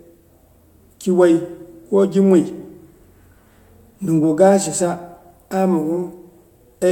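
Listening to this speech recording, nothing stood out as a technical problem.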